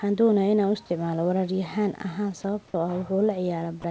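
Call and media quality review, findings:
Brief dropout at 3.82 s, near clip end: the sound gives way to a flat noise patch for about 20 ms, losing roughly 10 ms of signal. Likely sound dropped by the voice detector: the sender judged the sound as background and stopped sending, and the receiver filled the gap with comfort noise of the RFC 3389 kind. Patch sits within G.722 band limit at 8 kHz, room noise about 37 dB under speech.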